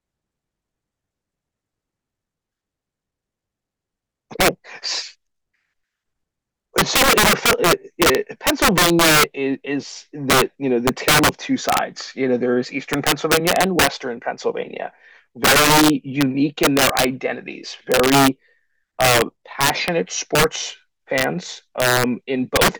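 Speech with integer overflow throughout: gain pushes peaks about 9 dB past full scale, and a few percent of samples wrap to the opposite sign, producing violent cracks on loud syllables.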